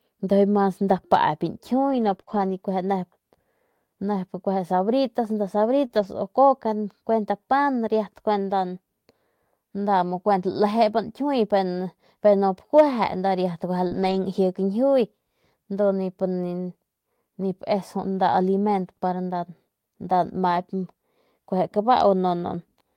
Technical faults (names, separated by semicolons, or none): scattered short gaps; lost packet rebuilt from error correction; short concealed packet loss